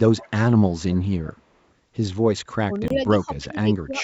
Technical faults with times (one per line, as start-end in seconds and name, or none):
0.17-0.30 echo leak
2.63-3.97 speech suppressed in double talk
2.88-2.92 Bluetooth dropout